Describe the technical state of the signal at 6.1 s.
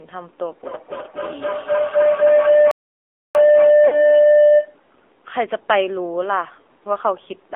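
At 6.1 s the speech is still running through the AMR narrowband mobile codec, as it does for the whole clip. It keeps only about 300 Hz to 3.5 kHz, and a low bit budget, which points to the 7.4 kbps mode, leaves the voice plainly buzzy and synthetic.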